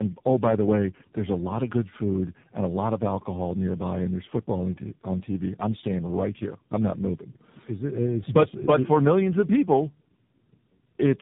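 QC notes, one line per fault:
Throughout: tandem speech coding. The speech passes through three successive speech codecs, consistent with iLBC, CVSD and a final AMR-NB stage around 7.4 kbit/s. Each re-encodes the previous stage's errors, so the speech sounds rough, muffled and warbly, with nothing above 3.8 kHz.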